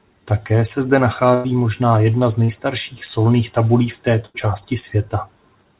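At 1.34 s, after "se zde", a burst of packet loss drops about 100 ms. The last sound is stretched and fades before audio resumes at "možná jedna z".

At 2.44 s, after "možná jedna z", a short concealed packet loss fills a 40 ms hole. It smears briefly before "solných tabulí v".

At 4.26 s, after "solných tabulí v", another burst of packet loss removes about 80 ms. It is heard as a fading, held continuation.

The band-limited sound, with nothing above 4 kHz, points to a G.711 A-law call path.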